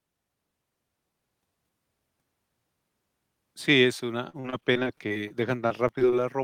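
Repeated packet loss hits the speech twice, from 4.29 to 5.32 s and again from 5.68 to 6.14 s. Packets keep arriving late or not at all, and each hole is patched by stretching the last received sound before the next dropout follows. Both stretches turn choppy and robotic. In the first, about a fifth of the time is concealed and gaps run up to 40 ms. In the second, about a sixth is concealed, with gaps up to 25 ms.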